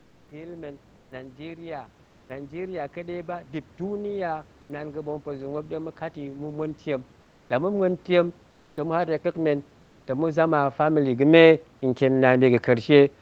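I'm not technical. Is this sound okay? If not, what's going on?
No. Two things happen in this speech recording.

The first is automatic gain rising. From about 0.28 s to 12.95 s, the call's automatic level control decides the microphone is too quiet and keeps turning it up. The voice and the faint room noise behind it get louder together, slowly and steadily, across nearly the whole clip, instead of staying at one level.

The second is comfort noise in place of the background. In five short pauses, at 0.95 to 1.11 s, 2.05 to 2.29 s, 4.61 to 4.69 s, 7.21 to 7.49 s and 8.51 to 8.77 s, the real room sound is replaced by a smooth, even hiss that is slightly quieter. This is likely the call software's silence-saving mode, which stops sending audio when nobody is speaking and lets the receiving end fill the gap with artificial noise.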